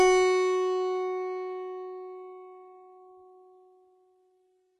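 A music clip with two faults running through its whole length. Sample clock jitter adds a fine hiss and roughness that tracks the loud, bright passages and drops away in quieter moments. The converter clock is wandering by a couple of microseconds, so steep waveform slopes are sampled at the wrong instants, leaving an error floor roughly 40 dB below the music. The treble also sounds gritty and metallic, and nothing remains above 11.8 kHz. This is likely HE-AAC compression: the upper band is rebuilt by copying lower harmonics upward under a coarse envelope, so they misalign at the crossover. The heavy damage fits HE-AAC v2 at a very low bitrate, around 16 kbps.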